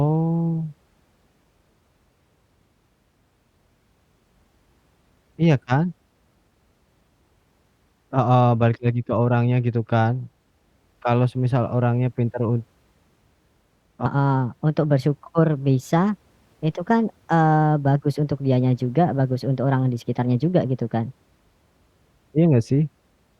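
From 14.06 to 21.38 s, a section at the wrong speed runs 1.23 times too fast, likely from being played against a mismatched clock. The speech rises roughly four semitones and hurries at the same moment. A pure pitch shift would leave the timing unchanged, but here both jump together.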